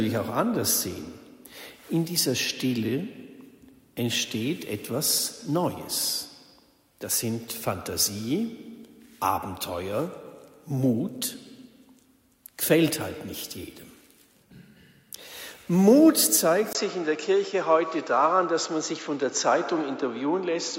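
At 16.73 s the sound briefly drops out for about 20 ms, then returns duller, with nothing above 7.6 kHz, a faint new background noise, and roughly the same level. This likely points to an input switched to a poorer device, narrowing the band through 20.78 s.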